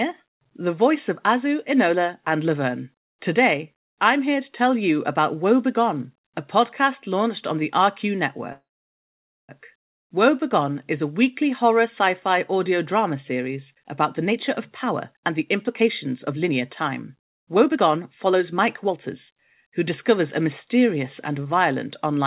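At 8.52 s the speech stops and a brief trace of the last sound carries on before dropping into near-silence, which lasts about 0.87 s. The speech resumes at 9.51 s exactly where it left off, with nothing skipped. This is a call audio freeze, likely caused by packets held up in transit until the jitter buffer ran dry. The receiver padded the wait, inserting roughly 0.97 s of extra delay rather than losing any speech.

Just after "audio drama series", from 13.74 s to 21.53 s, the speech becomes noticeably hurried, running at about 112% of normal speed while its pitch stays the same. This is a jitter buffer speed-up. Once the backlog of late audio arrived, the buffer held more than it needed. The receiver trimmed many tiny pitch-period slices in succession to drain the excess, cutting roughly a second overall. Throughout, the narrow call-codec band is audible, with nothing above 4 kHz, consistent with G.711 mu-law.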